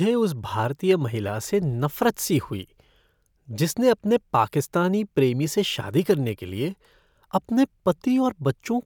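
No technical faults are audible.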